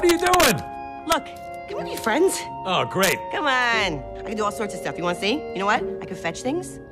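Integer overflow strikes from 0.09 to 0.51 s, at 1.12 s, and from 3.03 to 3.12 s, pushed about 5, 1 and 3 dB past full scale. Peaks wrap to the opposite extreme, giving violent cracks, seen as sudden large vertical jumps on the waveform and broadband spectrogram streaks.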